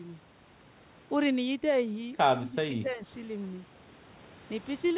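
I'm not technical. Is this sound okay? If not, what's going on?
No. The speech dips twice, from 2.41 to 2.59 s and from 2.75 to 3.0 s, losing level and sounding pulled back. This is likely speech suppressed in double talk: the echo canceller mistook the talker for echo while the other side spoke and turned both down.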